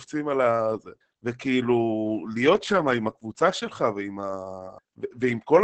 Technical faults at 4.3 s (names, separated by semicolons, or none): Opus voice compression